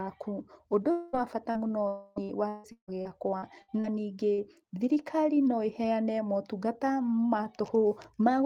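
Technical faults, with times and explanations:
0.91–1.16 s and 1.88–2.19 s, long network dropout: The sound stretches into a fading buzz for about 0.21 s, then about 0.28 s. It never falls silent. The likely cause is that about 0.22 s and 0.28 s of audio never arrived, and the receiver kept extending the last sound.
1.13–1.15 s, 1.55–1.57 s and 4.38–4.40 s, lost packet rebuilt from error correction: Each 20 ms stretch sounds rougher and noisier, but there is no gap. The lost packet was replaced by a low-bitrate copy carried in the next packet, which holds less detail.
1.51–1.68 s and 4.34–4.41 s, short concealed packet loss: Each shows a brief smear of about 40 ms. That much audio missed the decoder, so the last sound was continued and blended back. The first patch adds roughly a hundredth of a second.
2.16–3.86 s, repeated packet loss (robotic sound): The audio turns choppy and robotic, with pieces missing. 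Seven separate holes total about 0.54 s, the longest 157 ms. Continued sound covers about a third of this span. Error-correction copies rebuild roughly 0.15 s more.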